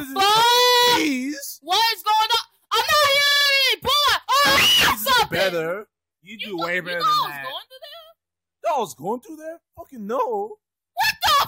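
Repeated frames from 3.26 to 3.45 s: a 46.4 ms block, which fits two compressed frames, is played four extra times, so the decoder loops the same sliver of sound and it stutters. This adds 186 ms to the timeline.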